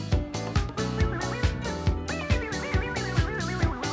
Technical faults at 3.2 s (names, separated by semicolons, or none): none